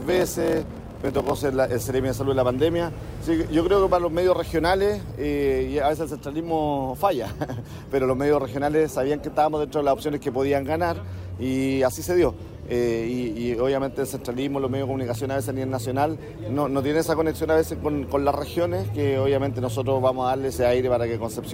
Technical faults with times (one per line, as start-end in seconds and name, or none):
0.00-1.37 block size mismatch (padded)